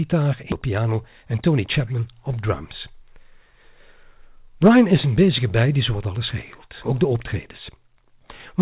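Skip ahead at 0.52 s to 0.54 s: playback jumps forward with no silence filling the join, and roughly 0.7 s of speech never arrives. This stretch was discarded while later audio already sat waiting, either lost in transit or thrown out when the jitter buffer overflowed, so the audio on either side is butted together almost directly. It sounds like an abrupt cut, with the talk resuming mid-flow as if a chunk had been snipped out.

Jitter buffer speed-up from 0.62 s to 2.24 s: immediately after the jump, the receiver was holding more audio than its target, so it trimmed tiny slices, each one or a few pitch periods long, over and over to bring the delay down. Altogether around 150 ms is shaved away and the speech runs at about 109% speed while keeping its original pitch. This part of the clip comes across as hurried. Throughout, the call-codec path limits the band, with nothing above 4 kHz, which fits G.711 mu-law at 64 kbps.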